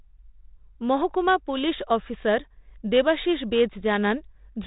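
Nothing goes wrong anywhere in this speech, which comes through a 32 kbit/s G.726 ADPCM telephone path, so the audio stops at about 4 kHz and carries only a light layer of coding hiss.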